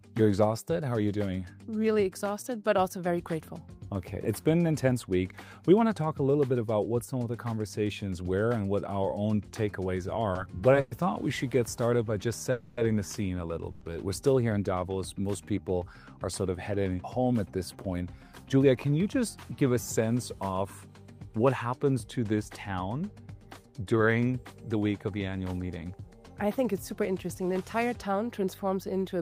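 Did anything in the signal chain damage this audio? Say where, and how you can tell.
Yes, in five places, all at the network and jitter buffer stage.

Repeated stalls (stutter) run from 10.33 to 10.93 s. The sound halts four times, each halt bridged by stretching the last sound, for about 160 ms in all. The longest is 110 ms, so roughly a quarter of that span is filler. Nothing is lost, but the audio drags and stutters because packets were arriving late and the buffer kept running dry.

A call audio freeze occurs at 12.51 to 12.79 s and again at 13.71 to 13.83 s. The last sound is held and extended for 260 ms and then 100 ms without dropping to silence, and the audio then resumes where it stopped. The likely cause is packets held up in transit, emptying the jitter buffer.

Jitter buffer speed-up occurs from 17.17 to 17.95 s at about 109% speed, trimming roughly 70 ms, and from 23.27 to 24.83 s at about 111%, trimming around 200 ms. 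Pitch stays put while the pace hurries, because the receiver was cutting tiny pitch-period slices to shed excess buffered delay.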